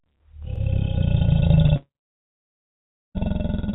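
A repeated buffer at 0.56 to 0.60 s: a short stretch of about 46 ms plays twice in a row, with a hard join where the copy starts. New audio did not reach the output device in time, so it played its last block again. The length fits a 2048-sample buffer. Nothing is skipped, so the stutter simply adds a tiny extra beat to the sound.

Short concealed packet loss at 1.67 to 1.70 s: about 20 ms of the call never arrived at the decoder in time. The receiver covered roughly 15 ms of that gap by extending the preceding sound and then blended back into the real signal. It comes across as a brief smear or wobble.

A long network dropout runs from 1.76 to 3.17 s, likely from a network outage during which no audio arrived for about 1.34 s. The receiver first stretched the last sound into a fading buzz or hiss. After that, roughly 1.2 s of the stretch is silent or holds only a low steady noise. The audio resumes at 3.17 s, and the material from the outage is never heard.

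A second repeated buffer at 1.95 to 2.00 s falls inside that dropout. It is the same kind of fault, another block of about 46 ms played twice, which fits a 2048-sample buffer. This time it repeats whatever the device was outputting during the gap, and the hard join sounds as a click or short stutter.

The audio passed through a G.711 A-law call path at 64 kbps, which leaves nothing above 4 kHz. This accounts for the narrow, band-limited tone throughout.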